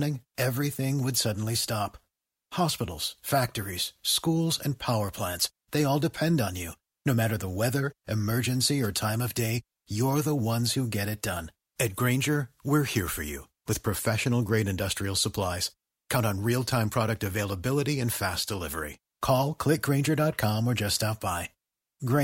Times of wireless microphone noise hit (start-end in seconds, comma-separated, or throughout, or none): 8.80-8.91